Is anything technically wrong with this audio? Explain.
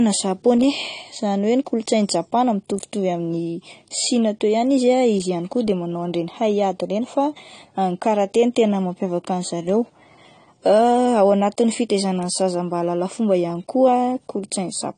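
Yes. AAC compression runs through the whole speech clip, with plainly audible damage. The encoder discards detail it judges inaudible, and the sound fits a low-bitrate AAC-LC encode at around 32 kbps, which is likely the cause. At that rate the high end is cut away and gaps open in the spectrum or bands are filled with substitute noise, so the speech sounds dull and smeared, with a fizzy, warbling texture on sibilants and held sounds.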